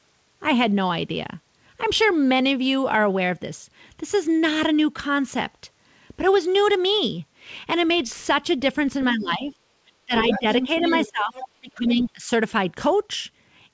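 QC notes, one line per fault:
9.13–9.53 s, 10.06–10.47 s, 10.64–10.84 s, 11.04–11.36 s and 11.52–12.3 s: speech suppressed in double talk. The speech dips by about 10, 15, 5, 20 and 25 dB, deepening toward the end. This is likely an echo canceller turning down both voices while both sides talk.
10.18–11.1 s, 11.35–11.48 s and 11.98–12.03 s: other side's voice leaking through. A second voice sits about 5, 15 and 20 dB below the speech, likely left over from loudspeaker echo that was not fully cancelled.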